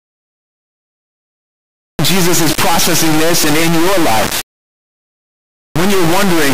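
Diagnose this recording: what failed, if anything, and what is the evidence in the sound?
Integer read as float, present for the whole recording: a sample-format conversion failure. The speech is replaced by an extremely loud, harsh buzz with a square-wave character that slams between silence and the clipping limit, dropping out to nothing only in the quietest passages. The 32-bit integer samples were interpreted as 32-bit float, so their bit patterns decode as values either vanishingly small or far beyond full scale, and the output toggles between zero and hard clipping.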